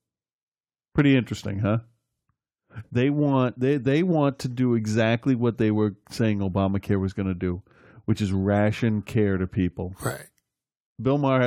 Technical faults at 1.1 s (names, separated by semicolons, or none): hard clipping